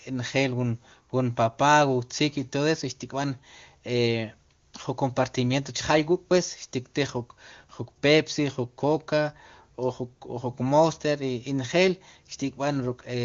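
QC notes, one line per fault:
No faults heard in this speech clip.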